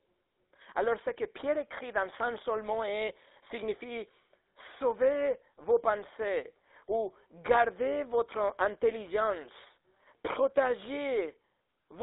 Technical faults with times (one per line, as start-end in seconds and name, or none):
0.00-12.03 GSM full-rate codec